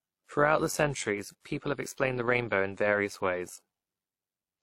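Transcoding between lossy codecs runs throughout the speech. Two different sets of coding artefacts are heard together: the smeared, slightly synthetic highs of a low-rate encoder sit beneath a second layer of swirly, watery distortion. The likely cause is an HE-AAC encode at around 32 kbit/s, later re-encoded to WMA 1 at around 64 kbit/s. The second codec wasted bits reproducing the first one's damage, kept its bandwidth limit, and added its own artefacts.

Overlap-add ripple is also present across the whole clip. The audio seems to have been split into windowed frames and reassembled with overlaps that don't sum to a steady gain, so the level dips and swells once per frame by about 6 dB. That modulation repeats around a hundred times a second, which points to frames spaced roughly 10 ms apart. It gives the voice a metallic buzz, with extra tones around the voice laid over every syllable.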